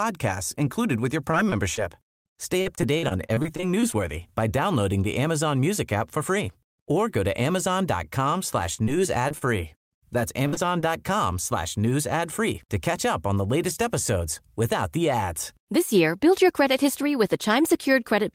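Just after "included with your", short concealed packet loss at 1.31, 1.49 and 1.75 s drops about 20 ms each; the decoder extends the preceding sound, leaving brief smears. From 2.61 to 3.94 s, before "by downloading the", repeated packet loss (robotic sound) produces twelve patched gaps, longest 42 ms, making the speech choppy. The same happens with four gaps from 8.74 to 9.43 s. A burst of packet loss at 10.47–10.54 s removes about 60 ms, heard as a held, fading sustain, then a further short concealed loss at 10.54 s. One more at 10.81 s, before "slash news ad free", adds another brief smear.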